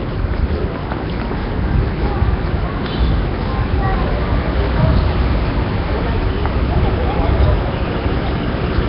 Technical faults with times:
0.00-8.89 Nellymoser compression

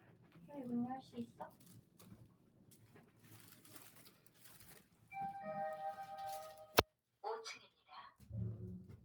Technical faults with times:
0.00-9.05 noise suppressor applied to music or sounds
0.00-0.38 sound cut by the noise suppressor
1.31-2.02 sound cut by the noise suppressor
2.27-3.31 sound cut by the noise suppressor
4.11-4.40 sound cut by the noise suppressor
4.80-5.11 sound cut by the noise suppressor
6.91-7.23 sound cut by the noise suppressor

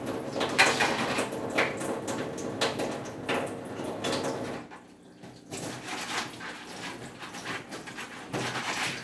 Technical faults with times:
none

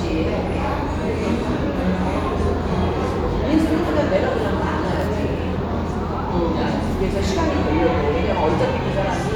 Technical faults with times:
none

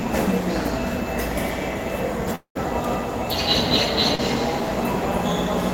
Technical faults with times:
2.35-2.57 long network dropout
4.15-4.20 short concealed packet loss

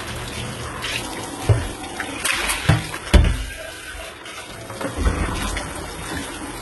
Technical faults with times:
0.00-6.61 HE-AAC compression

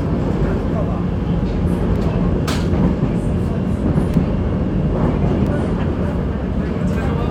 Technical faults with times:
1.96 block of digital silence
4.14 block of digital silence
5.47 block of digital silence

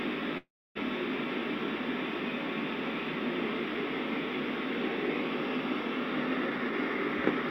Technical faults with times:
0.37-0.77 call audio freeze
6.47-6.73 jitter buffer speed-up

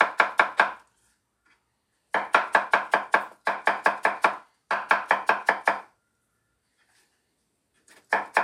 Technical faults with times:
none

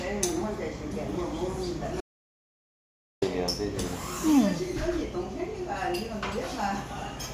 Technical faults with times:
2.01-3.22 audio dropout to silence

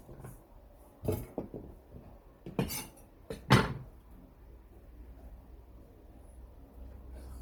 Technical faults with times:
0.00-7.41 Bluetooth LC3 compression
0.76-1.43 drift correction step

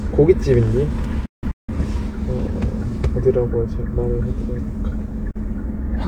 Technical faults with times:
1.26-1.72 digital broadcast dropout
5.31-5.40 digital broadcast dropout

